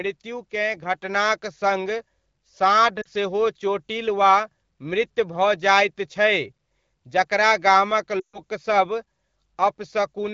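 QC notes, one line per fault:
1.02 s, microphone volume stepped up: voice and background jump together by about 4 dB in a single step, not the gradual ride of a compressor.
3.01–3.07 s and 8.19–8.39 s (right after "जकरा गामक"), lost AMR speech frames: the decoder replays the last good speech parameters at falling gain. This gives a brief 40 ms dip, then a 140 ms loss where the sound drops to near silence within two frames. It is smeared, not a hard gap like a dropout.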